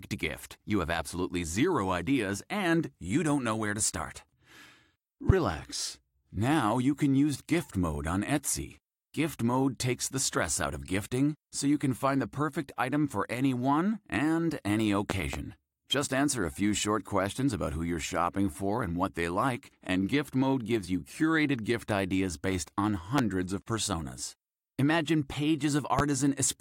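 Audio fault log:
5.30–5.33 s, 15.10–15.37 s, 23.18–23.21 s, 25.99–26.02 s, loud pop: sharp pulses about 20 dB above the speech, a double pop at 15.1 s, likely voltage steps from a plug, switch or static, shaped by downstream circuitry while speech continues underneath.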